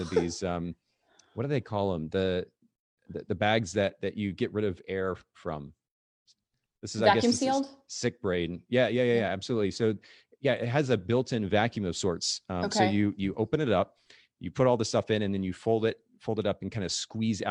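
Speech recording with no audible technical faults.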